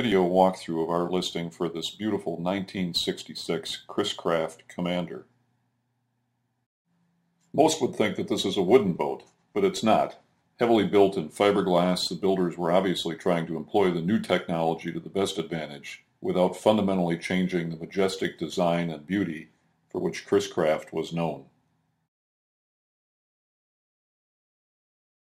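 Throughout the clip, crude rate conversion picks the nearest existing sample instead of filtering, consistent with a 48 kHz to 44.1 kHz change. The resulting error, roughly 30 dB below the signal, adds a gritty, inharmonic fizz that tracks loud and high-frequency sound.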